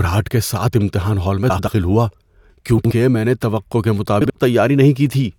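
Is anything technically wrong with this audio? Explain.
Yes, this speech has frames out of order at 1.50–1.68 s, 2.78–2.91 s and 4.21–4.31 s. In each spot two adjacent blocks, about 85, 64 and 43 ms long, were swapped, so the sound flutters, and no time is lost.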